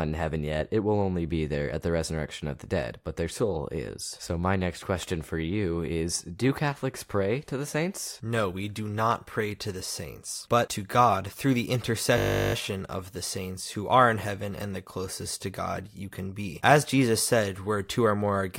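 At 12.18 s there's a system hang loop running to 12.54 s. The machine stalled while the audio hardware kept replaying one 20 ms slice of its buffer, 18 times over, so you hear a steady 50 Hz buzz instead of speech. Almost no audio goes missing afterwards.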